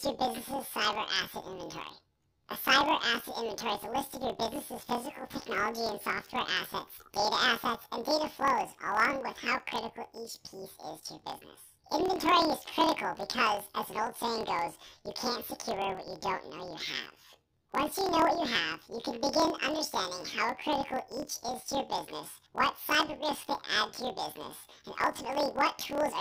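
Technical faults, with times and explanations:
Throughout, planar audio read as interleaved: each 26.12 ms block plays twice at double speed, first its left half and then its right, so the speech sounds an octave high with a 38.3 Hz buzz. A spectrogram shows widely spaced harmonics crossed by vertical seams every 26 ms.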